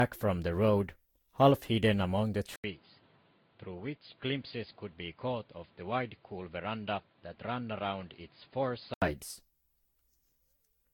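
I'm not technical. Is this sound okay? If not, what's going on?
No. Generation loss, throughout: the speech sounds swirly, smeared and hollow, likely from being compressed and re-saved around seven times, each pass adding damage.

Input switched to a poorer device, from 2.56 to 9.02 s: after a brief gap, the speech turns duller, quieter and noisier, likely because recording moved to a worse microphone.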